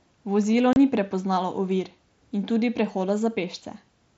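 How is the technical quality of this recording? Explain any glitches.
The recording has one audible glitch, a brief dropout at 0.73 to 0.76 s, just before "ni prepoznalo ovir in". It is unconcealed Bluetooth headset packet loss: about 30 ms of audio packets between headset and phone never arrived, which fits roughly four lost frames, and silence or an idle pattern took their place. Unlike a concealed loss, nothing is repeated or smoothed over. The gap is a clean hole with abrupt edges. The audio travels over a wideband mSBC headset link, which passes sound up to 8 kHz.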